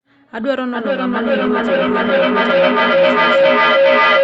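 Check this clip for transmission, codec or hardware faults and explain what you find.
There's one clear fault here. From 0.65 s to the end, a feedback howl builds near 500 Hz, with repeats roughly every 400 ms: two devices in one room are looping sound back to each other, peaking about 10 dB over the speech.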